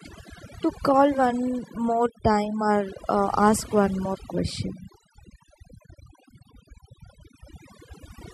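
From the first moment to the last, the speech carries overdone noise removal. Someone pushed a noise reducer way too hard, so any frequency band sitting close to what it took for noise gets pulled down or shut off entirely, and the softer bits of the voice get swallowed along with the noise. You hear it as a lowered background broken up into little twinkling, warbling specks.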